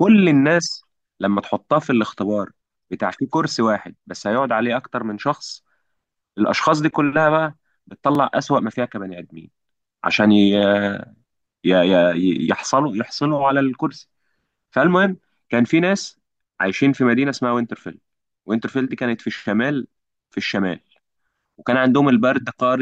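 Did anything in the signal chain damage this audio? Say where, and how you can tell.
Yes. There are overlapping chunks at 8.15 s and 18.18 s, in the buffering or chunked processing stage. Each join replays about 23 ms of the speech, heard as a brief stutter. The 10 s spacing shows each block starting before the previous one finished.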